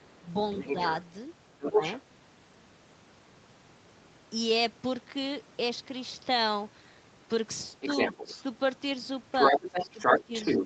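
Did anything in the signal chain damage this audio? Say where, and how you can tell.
Yes, in the call processing stage. The echo canceller likely left loudspeaker echo in the microphone signal, so the other side's voice leaks through. A second voice comes through at 0.56–1.03 s, 1.61–2.0 s, 7.8–8.43 s and 9.33 s to the end, from slightly below to slightly above the talker's level.

The same stage shows speech suppressed in double talk. When both sides overlapped, the suppressor likely could not separate the talker from the echo and turned both down. The talker's voice drops briefly at 1.71–1.82 s and 8.13–8.28 s, and for longer stretches across 9.52–10.33 s, by up to around 10 dB.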